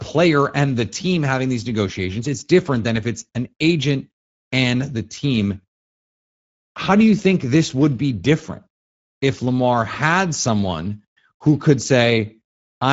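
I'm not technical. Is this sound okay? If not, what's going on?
No, not quite. The speech has been squeezed through the Speex codec, an older compression scheme from internet calls and game chat, and the damage is plainly audible from start to finish. It saves data by rebuilding the voice from a rough model instead of keeping the real waveform, so the speech comes out grainy and hoarse. On top of that, nothing above about 7.7 kHz survives, which takes the crisp edge off the sound.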